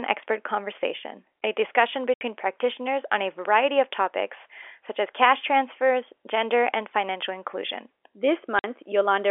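Hard-edged dropouts cut the speech at 2.14 to 2.21 s (70 ms) and 8.59 to 8.64 s (50 ms): packet loss filled with silence, with gap lengths that fit 10 ms packets.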